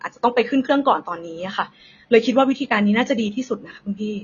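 Speech with AAC compression damage through the whole clip. Nothing is heard above about 6.9 kHz, so it sounds dull. Sibilants and held sounds smear and warble. This is likely AAC-LC coding at a low bitrate, around 24 kbps.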